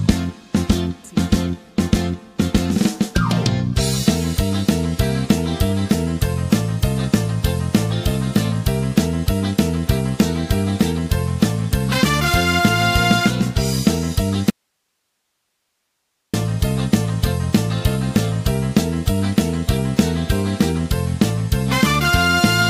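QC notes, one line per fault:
14.50–16.34 s, audio dropout to a faint residue: sound cuts abruptly to low hiss, around 55 dB down, for 1.83 s; likely the signal was lost while the path stayed live.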